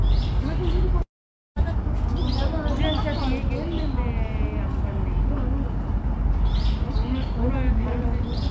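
At 1.02 s the everyday sound gives way to a brief fading buzz or hiss and then near silence until 1.58 s, most likely a long network dropout. About 0.54 s never arrives; the waveform flattens, and the spectrogram shows a blank gap beneath the 8 kHz ceiling of the G.722 call codec.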